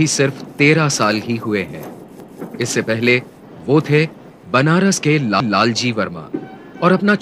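A stutter or click is heard twice: from 2.20 to 2.40 s, and again from 5.40 to 5.60 s. At each point a 200 ms stretch of the sound plays a second time. This is overlapping chunks. The audio was handled in pieces about 3 s long, and each new piece started 200 ms before the previous one had finished, so the tail of one chunk repeats at the head of the next at every join.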